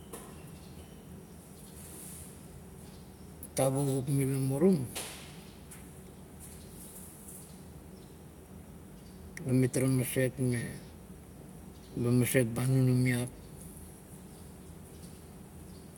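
Speech recording, with no technical faults detected anywhere in the clip.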